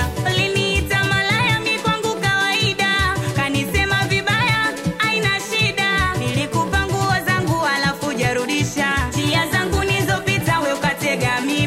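At 4.55 s there is a single sharp tick, too brief to register as a gap. It is a block of digital silence: for about 0.67 ms the audio drops straight to zero and then jumps back, with no fade at either edge. Those two abrupt steps in the waveform merge into one click. The length fits a 32-sample buffer that was left unfilled, either because the output deadline was missed or because a calculation returned invalid values.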